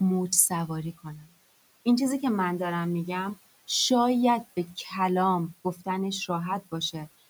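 From 0.93 to 1.34 s, speech is cut by the noise suppressor. It mistakes part of the speech for background and pulls it down by about 19 dB. Roughly a third of a second sounds swallowed and faint. Room noise sits about 22 dB below the speech.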